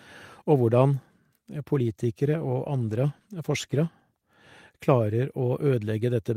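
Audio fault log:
1.67–3.99 s, call bitrate drop. The speech turns coarser and rougher for about 2.3 s. The call's encoder was told to spend far fewer bits, so it coded the sound more crudely. The change fits a fall from 32 to about 18 kbps. Clarity returns at 3.99 s.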